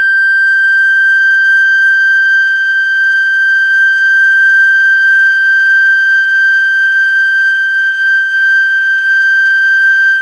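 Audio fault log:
No audible faults found.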